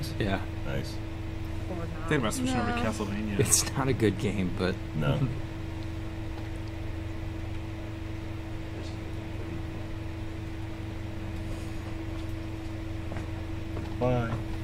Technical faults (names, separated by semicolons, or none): none